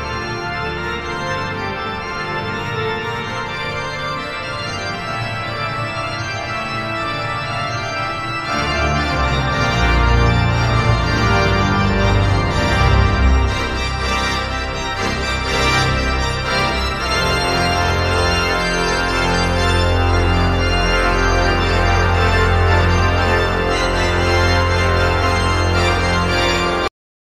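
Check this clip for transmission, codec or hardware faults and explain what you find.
One fault is present: a cut-off end at 26.88 s. The final buffers were never written or played out, so the audio halts mid-sound and falls straight to digital silence with no natural decay, leaving the last 0.39 s of the clip empty.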